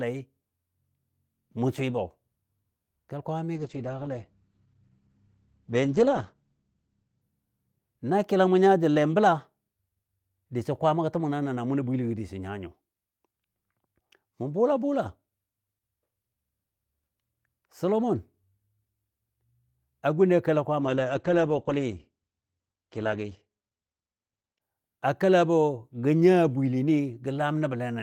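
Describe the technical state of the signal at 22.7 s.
At 22.7 s the signal is inside a call bitrate drop lasting from 20.81 to 24.67 s. The encoder is starved of bits, which fits a fall from around 32 to 11 kbps, so it codes more coarsely and narrows the band from 20 kHz to 8 kHz. Speech sounds muffled and watery, and on a spectrogram the energy above 8 kHz disappears under a flat ceiling.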